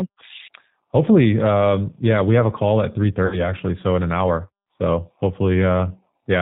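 Throughout, the speech runs through the G.729 codec at 8 kbit/s, which rebuilds each 10 ms frame from a vocal tract filter, a pitch predictor and a handful of pulses. Nothing above 4 kHz survives, so the sound is plainly dulled, rough and slightly synthetic.

From 3.26 s, just after "have a call at", VoIP packet loss is concealed by the speech codec. About 60 ms went missing, which fits three 20 ms packets. The decoder stretched its last pitch and filter with falling gain, giving a buzzy tone or coloured noise that fades. Because each frame builds on the one before, the sound stays weak or distorted until about 3.52 s, just before "so in an hour".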